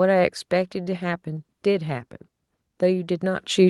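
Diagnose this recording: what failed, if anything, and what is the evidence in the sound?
The failure is in call processing. At 3.39 s the microphone volume is stepped up. The speech and the background noise floor jump together, by about 8 dB. The change is abrupt, not a gradual fade. Because both rise at once, the cause sits upstream of any noise suppression. The call software judged the input too quiet. It then raised the device's input gain in a single step, not by smoothing the change over time.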